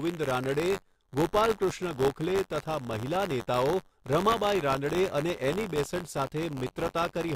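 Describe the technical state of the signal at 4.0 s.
Buffer tearing is present at 4.0 s, as it is across the whole speech clip. The write and read positions in the playback ring buffer have drifted until they cross inside each period, so a small slice of every buffer, roughly 4 percent, carries audio from about 20 ms earlier, bounded by hard joins. Those repeated splices produce a robotic buzz near 93.8 Hz that follows the signal, which fits a 512-sample buffer.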